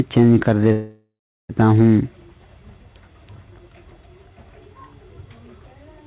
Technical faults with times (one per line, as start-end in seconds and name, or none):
0.72-1.51 call audio freeze